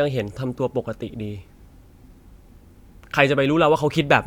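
No technical faults can be heard anywhere in the recording.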